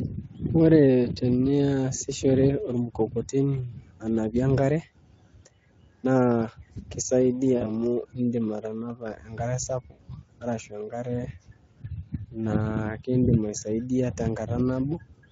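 From the start, the whole clip carries Speex codec damage that is plainly audible. The speech sounds hoarse and grainy, because this CELP coder has too few bits to describe the excitation signal accurately. The rate is around 17 kbps. At that setting, any content above 8 kHz is only a shaped noise fill, which leaves sibilants and breath sounding fizzy rather than defined.

At 7.57 to 7.71 s there is VoIP packet loss concealed by the speech codec. About 40 ms of audio is missing, which fits two lost 20 ms frames. The decoder fills the gap by repeating its last pitch and filter at falling gain. That produces a short buzzy or noisy smear that fades, and the sound stays thin until about 7.71 s. At 9.91 to 10.07 s, just before "arashu enkare", a longer gap of about 80 ms gets the same treatment. It gives a more extended stretched sound that decays, and the weakened, distorted sound carries on for a few tens of milliseconds after real packets resume.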